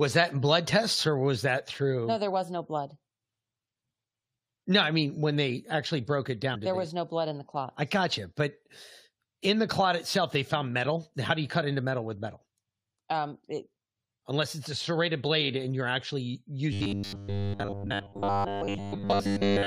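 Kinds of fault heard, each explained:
Damaged data in a compressed stream: A short glitch from 6.54 to 6.56 s, where the decoder hits corrupted frames, loses sync and hunts for the next valid header.
Robotic sound from repeated short buffers: From 16.73 s to the end, the speech turns into a stiff metallic buzz at 100 Hz. That pitch fits a 10 ms chunk being looped, likely because fresh audio stopped arriving in time, with roughly 70% of the material being repeats.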